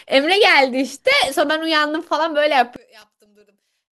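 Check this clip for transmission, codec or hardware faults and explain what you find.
Two kinds of fault are present: DAB burbling in two short bursts, and an apparent polarity inversion on one stereo channel from 2.76 s to the end of the clip.

DAB burbling appears from 1.12 to 1.35 s and again from 3.02 to 3.41 s. Weak reception lets a small fraction of bit errors, a few per thousand, slip past error correction into the MP2 stream. Corrupted samples put short noise blips in single sub-bands, and corrupted scale factors make sub-bands jump in level for up to a frame. Over the speech this is heard as burbling.

One channel inverted: from 2.76 s the speech drops by about 29 dB when heard in mono, leaving only a faint residue. The likely cause is one channel with reversed polarity. The centred speech, common to both channels, cancels in the sum, and only the small difference between them survives. 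This overlaps the second burbling burst.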